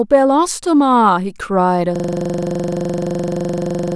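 From 1.96 s to the end, a rasping 23.4 Hz stutter takes over: a system hang loop, where the system froze and the hardware kept replaying one 42.7 ms buffer, which fits a 1024-sample ring.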